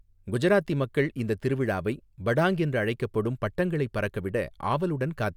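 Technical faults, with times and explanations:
No technical faults can be heard in this speech recording, and the signal holds steady and intact throughout.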